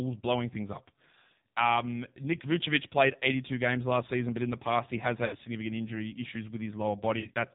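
Throughout the clip the speech carries the sound of the AMR narrowband mobile codec. Nothing above 4 kHz survives, and the voice has the buzzy, synthetic texture of a vocal tract model fed with very few excitation pulses. The damage is heavy, which fits one of the low AMR-NB modes at around 5.9 kbps, where the pitch pulses and the spectral envelope are coded too coarsely to sound natural.

From 5.26 to 5.37 s there are lost AMR speech frames. About 60 ms is missing, which fits three 20 ms frames failing. The decoder fills the gap by repeating the last good pitch and vocal tract settings at falling gain, so the sound stretches into a short smeared tone that sinks toward silence. It returns weak or rough for a moment. From 7.20 to 7.36 s a second burst of frame loss removes about 80 ms spread over 140 ms, in runs of up to 40 ms. This gives a stuttering series of dips and warbles rather than a single fade.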